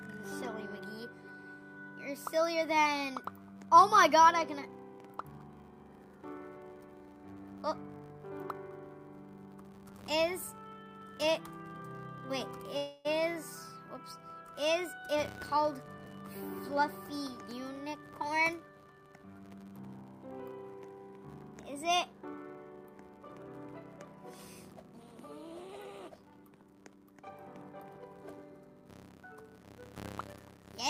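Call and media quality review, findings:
Filter restarted on every block. Steady 100 Hz buzz from 2.62 s to the end, tracking signal level. A filter stage in the processing chain resets its state per block. Each block opens with a small transient. Fits 10 ms blocks.

Call audio freeze. 12.77 to 13.07 s. Sound stalls into a fading buzz or hiss for 274 ms, then resumes where it stopped. Nothing lost. Likely delayed packets emptying the jitter buffer. Playout delay rises by 274 ms.

Jitter buffer speed-up. 15.13 to 18.19 s. Sound runs hurried at 109% speed, pitch unchanged. The receiver trims an excess backlog by cutting short pitch-period pieces repeatedly. About 0.3 s removed in total.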